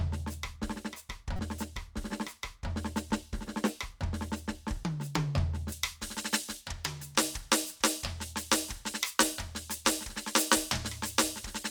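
At 1.36 to 1.40 s a corrupt frame was decoded: damaged bits in what sounds like two consecutive compressed frames were played anyway, scattering energy at wrong frequencies. It is heard as a brief chirp, squeak, blip or burst of noise in the music, peaking near -25 dBFS, and shows as a short, smeared vertical smudge on a spectrogram.

From 5.72 s to the end, pre-emphasis was left on, a J.17-style treble boost never undone by its matching cut. The top end stands about 11 dB higher at 10 kHz than at 1 kHz, making the music thin, bright and hissy. A spectrogram shows the upper bands abruptly brightening.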